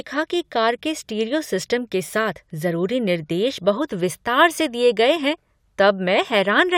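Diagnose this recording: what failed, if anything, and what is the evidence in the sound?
Nothing failed: no stage from capture through playback leaves an audible defect anywhere in this speech recording.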